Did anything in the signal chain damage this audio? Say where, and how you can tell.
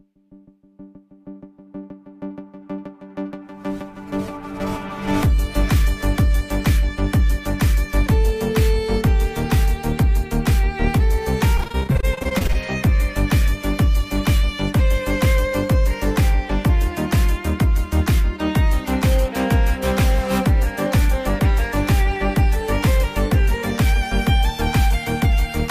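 Yes, the network stage caused repeated packet loss with a robotic sound between 11.57 and 12.56 s. About twenty short holes, none longer than 25 ms, were patched by stretching the previous sound. Roughly a third of that second is concealed, so it sounds choppy.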